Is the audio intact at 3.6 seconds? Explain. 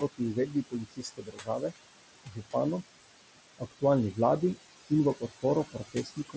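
No. From 3.58 to 3.83 s the noise suppressor cut speech: it mistook quiet speech for noise and pulled it down by up to about 21 dB, for roughly a tenth of a second in total, so sounds come out swallowed and faint. Noise suppressor artifacts also run through this moment, with background noise held down by about 21 dB between sounds and rising again under the words.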